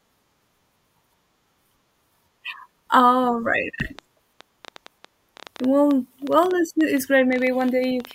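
From 3.8 s to 8.12 s, a train of clicks runs over the speech: around forty short pulses at roughly 7.9 per second, spaced unevenly, each peaking a few decibels above the speech itself. They sound like a ragged ticking that carries on through the pauses. On a waveform they show as narrow, similar spikes; a spectrogram shows thin vertical broadband lines. The cause is likely interference from nearby equipment or a faulty connection or power supply.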